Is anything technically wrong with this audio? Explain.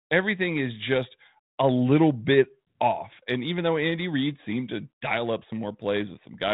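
No, nothing is technically wrong.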